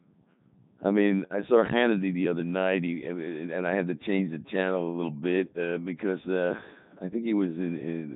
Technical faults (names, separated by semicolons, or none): Codec 2 vocoder